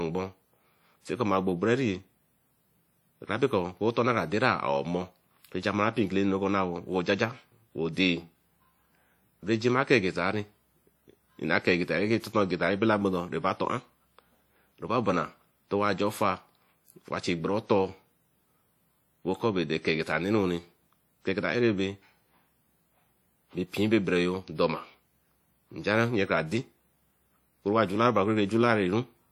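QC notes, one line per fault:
throughout: WMA compression. The speech has a plainly audible ringing, washy smear and hiss that breathes with the signal, likely from a transform codec at around 48 kbps spreading quantisation noise over long blocks. Unlike band-limiting, content still reaches 20.1 kHz.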